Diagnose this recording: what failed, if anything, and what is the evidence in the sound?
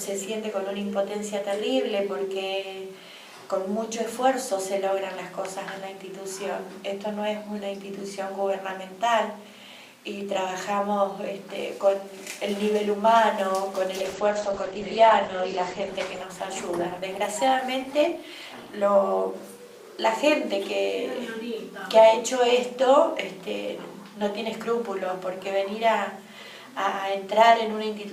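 From 13.98 to 20.15 s the sound turns rough and muffled, cut off above 8 kHz. This is a call bitrate drop, with the codec coding coarsely at what sounds like about 11 kbps.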